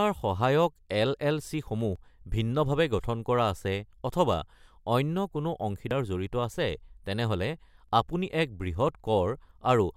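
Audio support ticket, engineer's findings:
Audio missing between chunks, at 1.96, 3.93, 5.91 and 7.89 s. Brief skips, each roughly 20 ms, spaced about 2 s apart; the speech jumps straight across each gap with no silence inserted. Landmarks: the phrase "ভিন্নভাৱে গঠন কৰা আছে" sits between the first two skips, and "আপুনি এক" follows the last. Likely cause is a recorder or processing stage handling 2 s blocks and dropping a sliver at each block handover.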